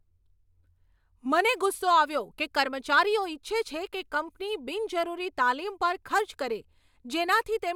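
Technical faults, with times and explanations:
No technical faults can be heard in this speech recording.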